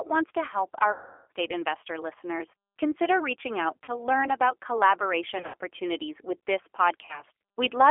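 G.729 codec damage runs throughout: the 8 kbit/s speech model squeezes the line into roughly 300 Hz to 3.4 kHz, leaving the speech audibly rough and synthetic. VoIP packet loss concealed by the speech codec strikes at 0.92 to 1.31 s, where about 380 ms goes missing and the decoder stretches its last frame into a fading buzzy tone or coloured noise. Shorter gaps follow at 3.84 to 3.94 s and 7.05 to 7.23 s (about 40 ms each), and at 5.38 to 5.55 s (120 ms, scattered), with weak or distorted speech after each.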